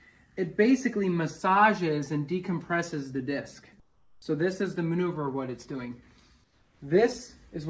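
From 3.80 to 4.22 s, and again from 6.44 to 6.80 s, the background gives way to a flat, textureless hiss, about 8 dB quieter in the first gap and about 3 dB in the second. This is likely comfort noise in place of the background. The sender stopped transmitting during the pause, and the receiver filled it with synthetic noise shaped only roughly like the room. The audio itself carries nothing above 8 kHz.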